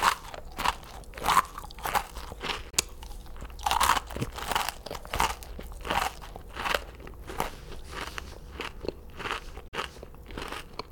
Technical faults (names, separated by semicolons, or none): Bluetooth dropout